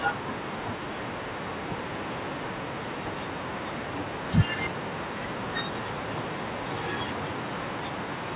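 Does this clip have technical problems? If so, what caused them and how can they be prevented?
No, this clip has no technical problems.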